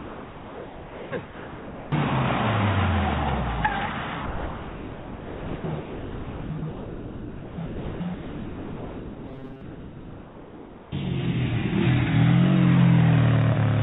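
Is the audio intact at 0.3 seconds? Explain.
No. At 0.3 s the clip sits inside sound dropped by the voice detector, from 0 to 1.12 s. The sender's detector likely took the sound for background and stopped sending, so the receiver played steady comfort noise over about 0.82 s of lost sound.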